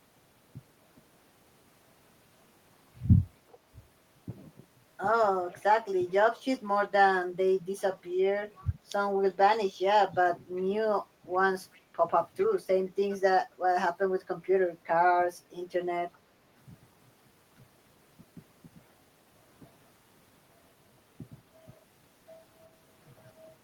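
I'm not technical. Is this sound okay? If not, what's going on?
No, not quite. There's an echo leak: short, faint scraps of the speech come back about 0.39 seconds late, at 3.49, 7.79, 8.56, 10.56, 11.73, 12.38 and 16.13 seconds. Each lasts only a tenth of a second or so and sits well below the main voice, loudest around 12.4 seconds. The likely cause is someone on speakerphone whose echo cancelling missed a few bits of sound and sent them back.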